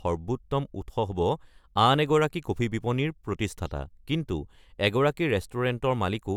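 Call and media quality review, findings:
No audible transmission or device faults found on review of the speech audio; nothing to escalate.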